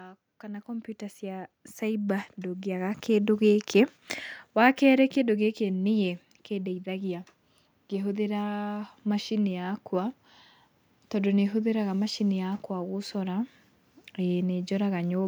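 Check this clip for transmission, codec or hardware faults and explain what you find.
There's one fault here, an automatic gain rise. From 0.25 s to 3.48 s the speech and the background noise swell up together by about 11 dB, because the gain control judged the input too quiet and slowly wound its gain up over those three seconds.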